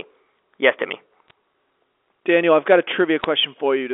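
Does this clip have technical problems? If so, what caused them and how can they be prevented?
Yes. There are bit errors on a digital phone line. Brief bursts of crackle sit at 1.28–1.31 s and 3.20–3.24 s. The speech is carried by G.711 mu-law telephone coding, limited to about 300 Hz–3.5 kHz. Each flipped bit corrupts one 8-bit sample. A hit on a high bit, or on the sign of a loud sample, throws that sample far off, giving a sharp tick. The error rate sounds very low, around a fifth of a percent. Error checking and correction on the transmission link would prevent it.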